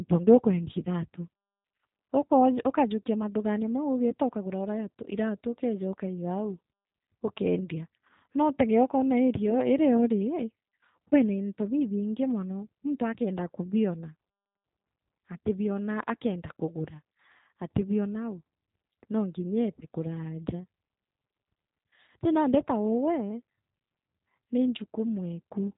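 Throughout, the speech carries G.729 codec damage: band-limited below 4 kHz, rough and synthetic from pulse-based excitation, unlike clean narrowband filtering, which fits 8 kbit/s coding.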